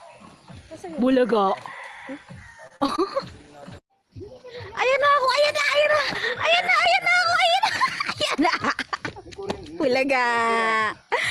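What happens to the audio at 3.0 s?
At 3.0 s the audio is just leaving a stretch of repeated packet loss (robotic sound) that runs from 2.67 to 3.00 s. Four separate holes fall inside that third of a second, the longest about 35 ms, and each is patched by extending the sound just before it, so about a third of the span is synthetic fill. The result is choppy, with small pieces missing. A single dropout would leave one clean gap, not this rapid chain of repairs.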